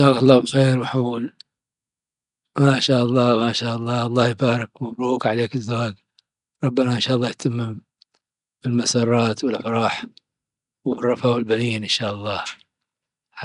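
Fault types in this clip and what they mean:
Nellymoser compression: A rough, hissy halo clings to the speech throughout, with a smeared, underwater blur and nothing above about 10.6 kHz. The likely cause is the old Flash microphone codec, which spends a fixed two bits per sample on short blocks, leaves weak bands empty and fills them with noise; the density of damage fits a rate near 44 kbps. Unlike MP3 swirl, the grit is a steady noise fill, not warbling tones.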